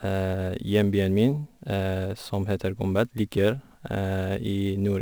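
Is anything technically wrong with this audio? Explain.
Yes, there's sample clock jitter running through the whole speech clip. The converter's clock wobbles by roughly 10 microseconds, so samples land slightly off-time, with error about 30 dB down that scales with waveform slope. You hear a gritty hiss riding on loud, bright moments, gone in pauses.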